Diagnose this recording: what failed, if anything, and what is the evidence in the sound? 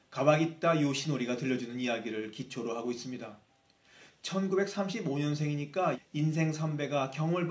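Nothing here has failed; the sound has simply passed through a call's microphone processing, which explains why nothing reaches above 8 kHz and why the lowest bass is trimmed, and that is exactly how such a stage is meant to behave.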